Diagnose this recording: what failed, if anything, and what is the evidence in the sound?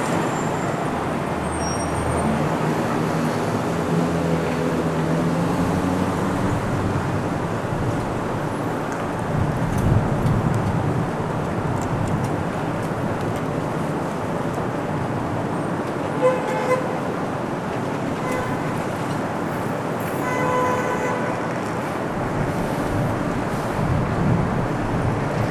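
Nothing here points to a failure at any stage; these sounds come through without anything an engineer would need to chase down.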